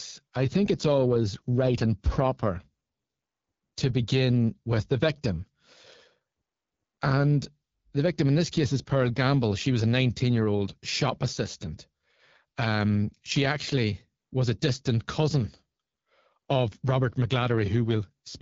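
Throughout the speech, the AMR wideband (HD Voice) codec is audible. The coding sounds like one of its lowest modes, around 8.85 kbit/s. Too few bits reach the pulse-driven vocal tract model, so the sound turns rough and raspy. Nothing is present above about 7.5 kHz.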